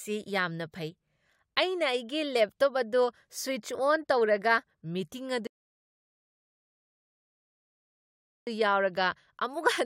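A rebuffering stall runs from 5.47 s to 8.47 s. The player used up the audio it had already downloaded and had to halt until more data arrived, so the speech drops abruptly into silence for 3 s. When playback returns, it picks up at exactly the point where it stopped, with nothing skipped or repeated. The gap adds 3 s of dead air to the running time rather than removing any material.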